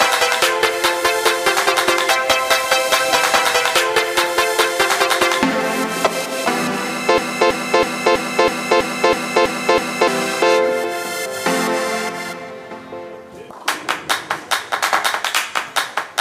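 At 7.18 s the sound gets stuck in a broken-record loop: a fragment about 325 ms long repeats exactly, back to back, nine times, until it lets go at 10.08 s. You hear a rigid stutter with identical repeats each time, which doesn't happen naturally. The likely cause is the player, encoder or stream stalling and resending the last chunk it held, so whatever should have played in those three seconds is simply gone.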